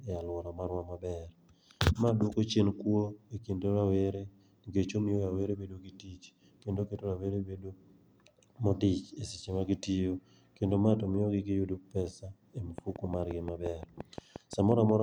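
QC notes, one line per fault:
12.78–14.90 s, train of clicks: likely interference from nearby equipment or a faulty connection or power supply injects a repeating pulse, about fifteen evenly spaced clicks at 5.7 per second after "giyudo pesa e", each peaking roughly 10 dB above the speech, heard as steady ticking through speech and pauses alike.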